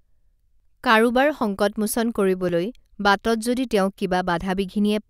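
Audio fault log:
0.6 s, 2.49 s and 3.98 s: dropped buffer (overrun). Each one is a quick jump where the speech lurches forward with no gap at all; at 0.6 s roughly 30 ms goes missing, and the later two skip only about 10 ms each. That sounds like the likely case of the app not reading its input in time, so the hardware overwrote a chunk and the two sides got butted together.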